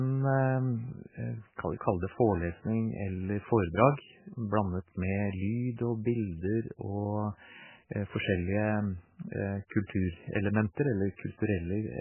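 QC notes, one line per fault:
Throughout: MP3 compression, likely a starved encoder near 8 kbps, cutting everything above 3 kHz; unlike a plain low-pass, weak detail flickers, sounding watery and swirly.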